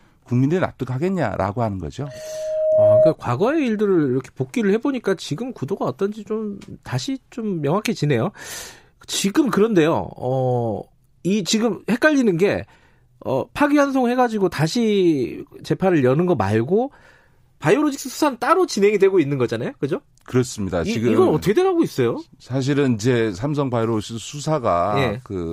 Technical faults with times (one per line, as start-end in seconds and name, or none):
2.03-3.15 loudspeaker feedback squeal